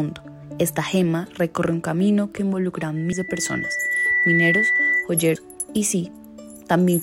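At 0.42 s the sound jumps forward: compressed frames are skipped. Roughly a tenth of a second of audio is missing, which fits about five frames of 23.2 ms. On a waveform the envelope shifts abruptly at that point, and a spectrogram shows a thin vertical seam where the texture no longer lines up.

From 2.96 s to 5.09 s there is a loudspeaker feedback squeal. The microphone is picking up its own loudspeaker, and at 2 kHz the loop gain exceeds one, so that tone feeds on itself. It swells over about a second and a half and peaks at about 5 dB above the rest of the sound before cutting out. A spectrogram shows a single bright horizontal line at 2 kHz that thickens and brightens as it builds, and the waveform envelope grows steadily under it.

At 3.11 s, during the squeal, another frame skip jumps over about a fifth of a second, which fits roughly ten frames. The 2 kHz line shows a brief discontinuity there.

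At 5.34 s a final skip drops about 200 ms, consistent with several frames. It appears as a vertical seam on the spectrogram.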